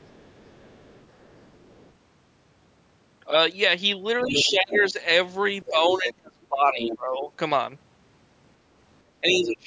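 From 0.02 to 1.92 s a faint second voice sits far beneath the speech, about 35 dB down. This is the other side's voice leaking through, likely because the far end was played on a loudspeaker and the echo canceller left a residue of it in the microphone signal. It returns from 4.23 to 4.92 s almost as loud as the talker, from 5.63 to 6.13 s and 6.77 to 6.97 s at about 10 dB below, and briefly from 9.30 to 9.34 s.

Overlapping those later intrusions is speech suppressed in double talk, from 4.24 to 4.98 s, 5.69 to 7.30 s, and 9.21 s to the end. Here the canceller likely could not tell the talker from the echo while both were active, and it turned everything down. The speech drops by roughly 15, 25 and 30 dB respectively. The two faults differ in direction: leakage adds an unwanted voice, while suppression takes away the wanted one just as that other voice appears.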